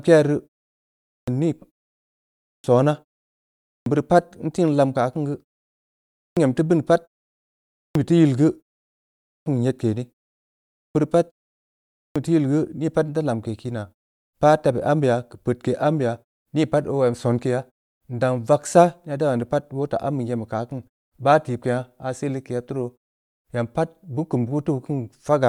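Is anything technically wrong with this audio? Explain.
Yes, there is a clipped start after a pause at 0.97 s (before "nii pa"), 2.33, 3.55, 6.06, 7.61 (between "teu bini pat" and "be teu"), 9.16, 10.6 and 11.81 s. After each pause of about 0.6 s, the output device sleeps and swallows 300–350 ms on waking. The speech therefore bursts in abruptly, and the waveform and spectrogram show flat silence cut by a hard vertical onset.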